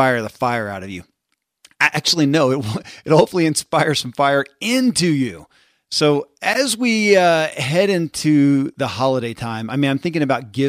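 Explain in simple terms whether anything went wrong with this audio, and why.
Nothing went wrong with this speech recording.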